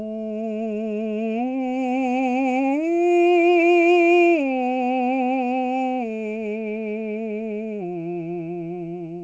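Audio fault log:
No faults heard anywhere in this music clip.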